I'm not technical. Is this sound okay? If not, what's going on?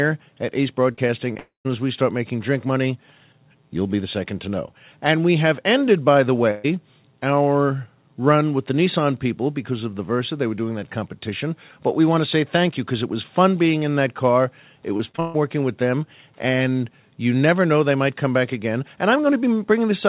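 No. There are three kinds of problem, all from the connection dropping pieces of the audio.

From 0.92 to 1.37 s, and again from 14.97 to 15.36 s just before "working with them", the sound turns choppy and robotic. This is repeated packet loss: small chunks keep going missing, and each hole is filled by stretching the last bit of sound. The second stretch is worse, with about half of it patched over and one gap lasting about 0.14 s.

Right after that, from 1.39 to 1.67 s, the sound smears into a fading buzz or hiss and then goes silent before coming back at "as we start making". This is likely a long network dropout. For about a quarter of a second nothing arrived, and that part is simply gone.

At 6.51 to 6.74 s, between "have ended by the" and "our run with the", the last sound is briefly held and fades. This is a burst of packet loss: about 0.14 s of audio went missing, and the stretched sound covers the hole.

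The call line itself only carries sound up to 4 kHz, so the audio has a telephone-like tone throughout.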